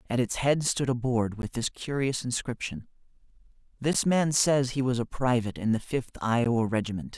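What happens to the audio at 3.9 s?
At 3.93 s the speech drops out for about 13 ms, a gap between chunks. The audio appears to be delivered in blocks of 2.5 s, and at this join a stretch of silence is left before playback resumes. Nothing is removed from the signal; it is simply pushed back. The result is a brief hole with abrupt edges on both sides, heard as a tiny interruption in the speech.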